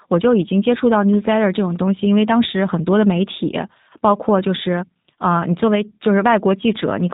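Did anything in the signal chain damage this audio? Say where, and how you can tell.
Yes, at the codec stage, throughout the clip: this is G.729 coding. The speech is band-limited, with a spectrogram showing nothing above 4 kHz, and it sounds plainly rough and synthetic. That fits an 8 kbit/s codec rebuilding each 10 ms frame from a filter, pitch predictor and sparse pulses.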